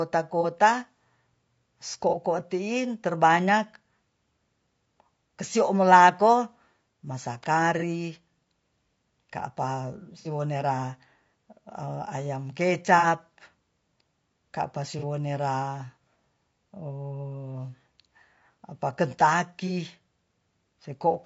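The whole clip carries the signature of a low-bitrate low-delay AAC compression, likely AAC-ELD, whose short frames cannot resolve the pitch harmonics of speech finely. The result is plainly audible: the voice is rough and grainy, with noise filling the gaps between harmonics and a thin, synthetic-sounding top band, which fits a rate near 32 kbps.

AAC frame loss with concealment then strikes seven times. Each time the decoder loses data and patches the hole from the last good spectrum, so the sound briefly smears into a noisy, phasey blur. The short gaps, each about 30 ms, which fits one frame, fall at 0.41 s, at 2.09 s just before "tiin terbanyak", at 7.79 s right after "kesiomolako masa", at 14.99 s and at 19.67 s. The two longer patches, about 60 ms each and pointing to two consecutive frames, run from 10.19 to 10.27 s and from 12.98 to 13.07 s.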